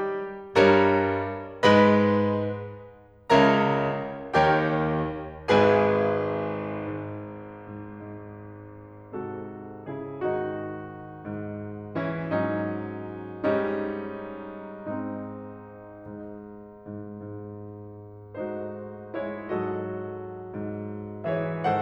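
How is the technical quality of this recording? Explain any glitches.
The music recording has no technical faults to report. There are no glitches to explain anywhere in the audio.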